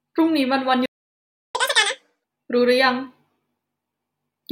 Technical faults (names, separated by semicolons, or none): playback stall; catch-up at higher speed